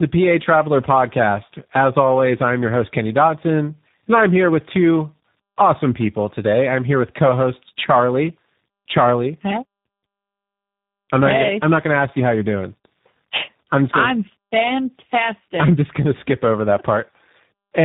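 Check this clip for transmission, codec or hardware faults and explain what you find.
The speech shows one fault, present for the whole clip: tandem speech coding. The audio passed through two speech coders in a row, sounding like G.726 at 24 kbit/s followed by G.729A at 8 kbit/s with a G.711 link between them. Each stage re-coded the previous stage's distortion, so the speech sounds rough, muffled and warbly. A single low-bitrate codec would cause noticeably less compounded roughness.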